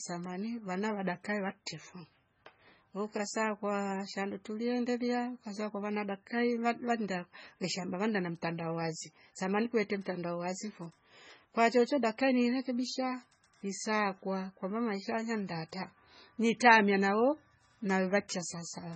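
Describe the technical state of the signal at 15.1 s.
At 15.1 s the speech shows low-bitrate audio saved at a high bitrate, present throughout the clip: nothing remains above 8.3 kHz, and the smeared, swirly artefacts of a very low-bitrate MP3 stage persist, likely because a later high-bitrate encode kept earlier losses it cannot restore.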